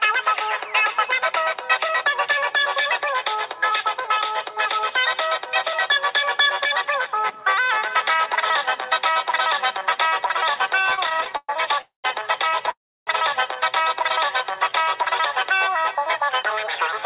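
Between 10.79 and 11.49 s the audio catches and drags in a run of repeated stalls (stutter): fourteen short hold-ups, the longest 119 ms, fill about 37% of that span. Packets were reaching the receiver late, so its jitter buffer kept running dry and it extended the last sound each time rather than dropping anything. Two call audio freezes follow, at 11.81 to 12.05 s and 12.70 to 13.08 s. In each, the sound hangs as a fading buzz or hiss and then goes silent, for about 120 ms in the first and about 310 ms in the second, before resuming where it stopped. The likely cause is packets held up in transit, which emptied the buffer and pushed the playback later by 224 ms and 364 ms. From 14.32 to 15.13 s a jitter buffer slow-down stretches the audio to 94% speed at unchanged pitch. Repeated pitch periods or bits of pauses add 58 ms to refill the reserve. The whole clip is band-limited with nothing above 4 kHz, which points to a narrowband telephone codec such as G.711.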